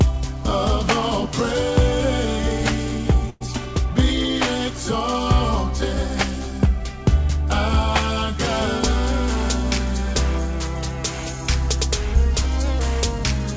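At 3.30 s a burst of packet loss drops about 100 ms of audio. The receiver stretches the preceding sound into a fading fill, then playback skips ahead.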